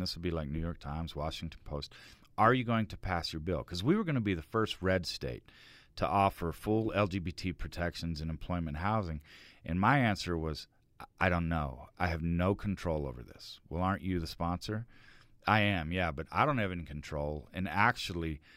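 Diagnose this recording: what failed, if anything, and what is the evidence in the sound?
Nothing in this speech recording points to a failure at any stage of the chain, so there's nothing here to diagnose.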